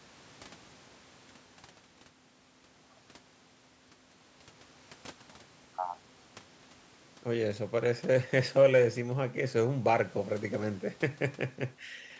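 The speech carries no audible technical faults.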